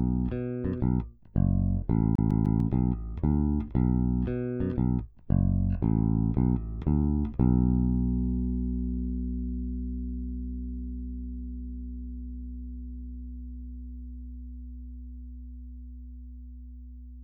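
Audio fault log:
2.15 to 2.60 s, CD stuck on one turn: a scratch throws the laser back one track each revolution, so a 0.15 s slice of audio plays three times over, each repeat cut by a brief mute at the jump, giving a fast, even stutter.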